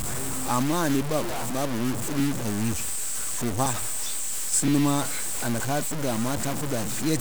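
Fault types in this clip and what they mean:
Low bit depth without dither: The speech sounds harsh and grainy throughout, with the distortion tracking the signal and quiet passages breaking up. This is likely a roughly 4-bit truncation without dither, leaving error nearly as loud as the speech itself.
Dropped buffer (overrun): Four abrupt forward jumps occur at 2.2, 3.66, 4.68 s (just before "ma a") and 5.6 s (just after "ma a"). Each likely marks a lost capture block of around 70 or 40 ms, with the edges joined without silence.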